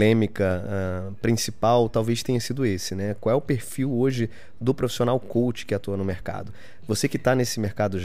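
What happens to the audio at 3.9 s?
At 3.9 s the speech carries a DC offset, as it does for the whole clip. The waveform sits shifted off zero by a constant of about -36 dBFS. You cannot hear it directly. It eats a little headroom and appears as steady energy at the very bottom of the spectrum.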